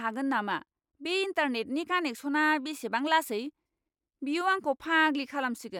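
No technical faults can be heard anywhere in this speech recording. At no point can the audio path be heard going wrong.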